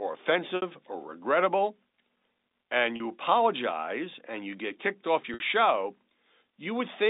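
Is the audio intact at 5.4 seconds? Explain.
No, right after "you get kicked off" there's packet loss with pitch repetition from 5.34 to 5.40 s. About 60 ms dropped out, likely three 20 ms packets, and the last pitch period loops, giving a brief buzzy hold.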